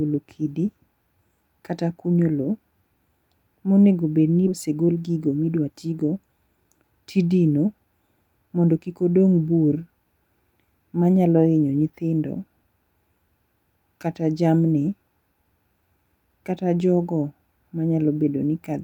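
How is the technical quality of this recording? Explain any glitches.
The recording has two delivery faults.

At 4.47 to 4.49 s there is a skip ahead. Roughly 0.7 s of speech never plays. That stretch was dropped while later audio was already queued, so playback jumps forward. Nothing fills the gap. The two sides are butted together almost directly. You hear an abrupt cut, as if part of the speech was snipped out, and the delay shrinks by about the same amount.

Shortly after comes a jitter buffer speed-up, in two bursts. From 4.67 to 6.04 s the speech runs at about 112% speed, trimming roughly 150 ms. From 6.48 to 6.84 s it runs at about 111%, trimming around 50 ms. The buffer was holding more audio than its target. It cut tiny slices of one or a few pitch periods, over and over. Pitch stays the same. The talker simply sounds briefly rushed.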